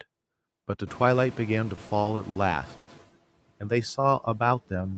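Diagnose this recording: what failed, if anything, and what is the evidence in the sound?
The noise suppressor is catching up in the call processing. Room noise jumps by about 24 dB around 1 s, and from 0.86 s it comes through with less reduction, then sinks by about 11 dB as the noise estimate adapts over roughly 1.95 s, settling by 3.05 s.

Repeated stalls (stutter) between 1.75 and 2.37 s point to the network and jitter buffer. Five late-packet gaps, the longest 60 ms, get patched by stretching the last sound, 140 ms in all, about 23% of that span. Nothing is lost, but the speech drags and hiccups.

There's a call audio freeze from 2.77 to 2.89 s. The last sound is held as a short fading buzz or hiss for 100 ms, then the speech carries on with nothing missing. It's likely a jitter buffer underrun after a 100 ms jump in network delay.

A jitter buffer slow-down runs from 3.82 s to 4.95 s. 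The receiver repeats pitch periods and bits of pauses to rebuild its reserve, adding about 134 ms. The speech plays at about 89% speed with unchanged pitch, so sounds feel drawn out, through an Opus-style path that tops out at 8 kHz.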